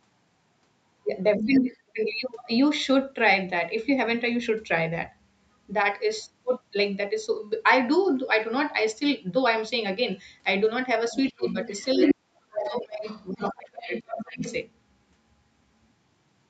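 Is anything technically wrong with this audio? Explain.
Yes. The speech has two related faults that cluster around 1.4 to 2.0 s and 11.1 to 14.5 s.

Other side's voice leaking through occurs from 1.39 to 1.98 s, 11.12 to 12.15 s and 12.56 to 14.54 s. A second voice is audible alongside the talker. It sits roughly 5 dB below the talker in the first stretch, roughly 5 dB above in the second, and roughly 10 dB below in the third. The likely cause is loudspeaker playback reaching the microphone and surviving the echo canceller, so the far end's speech is sent back into the call.

Speech suppressed in double talk overlaps those stretches at 1.46 to 1.97 s, 11.37 to 11.56 s and 11.95 to 14.42 s. While both voices are present, the talker's level falls sharply: by roughly 30 dB over about a third of a second in the first case, roughly 20 dB over about a tenth of a second in the second, and as much as 40 dB across about two seconds in the third. 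This is likely the echo canceller failing to separate the near talker from the echo and attenuating both together.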